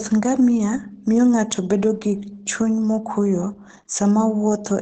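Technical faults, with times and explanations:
Throughout, Opus voice compression: the speech is plainly muffled and slightly hoarse, with nothing above about 9.2 kHz. The SILK coder codes the excitation coarsely in wideband mode. That fits a low bitrate near 12 kbps with 20 ms frames.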